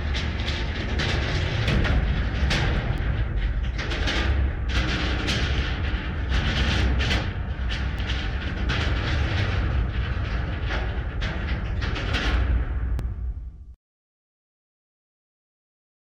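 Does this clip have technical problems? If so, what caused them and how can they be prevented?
Yes. Brief clicks or stutters at 2.98, 7.99 and 13.0 s, spaced 5 s apart, come from overlapping chunks: each 5-second chunk replays about 6.5 ms of the last. Align chunk boundaries exactly, or crossfade and trim overlaps when joining.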